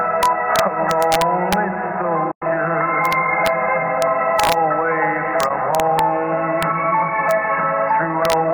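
The audio suffers integer overflow at 0.23–1.53 s, 3.05–3.47 s, 4.02 s, 4.40–4.53 s, 5.40–5.99 s, 6.63 s, 7.31 s and 8.25–8.33 s. Loud peaks pushed only about 0 to 2 dB past full scale wrap to the opposite sign instead of being held, producing violent cracks far harsher than clipping's flattened buzz. A digital broadcast dropout at 2.31–2.42 s fades out over 8 ms and mutes for about 96 ms, which fits a few lost frames. Unlike a splice, the material sent during the mute is gone when the sound returns.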